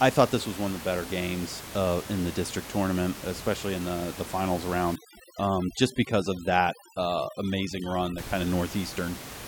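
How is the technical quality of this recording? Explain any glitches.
The recording has one clear glitch: overdone noise removal from 4.96 to 8.18 s. The room noise sits about 13 dB below the speech, and in that span a noise reduction stage clamps down on it far too hard. It pushes individual frequency bands down or off whenever they come close to its noise estimate. Quiet parts of the speech fall below that line and vanish with the noise. The background drops and breaks up into twinkling specks.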